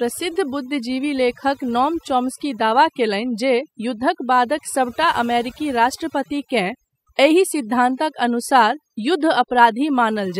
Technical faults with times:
0.00-10.40 overdone noise removal

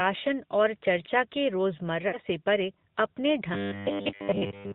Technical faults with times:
0.00-4.75 AMR narrowband mobile codec
2.08-2.18 lost AMR speech frames
3.54-4.75 robotic sound from repeated short buffers

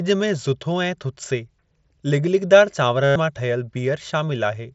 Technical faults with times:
3.03-3.16 concealed Bluetooth headset packet loss

